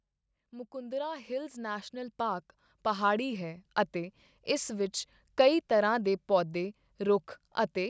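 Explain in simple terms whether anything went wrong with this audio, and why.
Something did go wrong: automatic gain rising. From about 0.37 to 4.96 s, the level control decided the sound was too quiet and slowly turned it up, finishing just before "ਕਈ ਤਰ੍ਹਾਂ ਦੇ ਪੌਦੇ". Unlike someone leaning closer, the voice and background noise swell together.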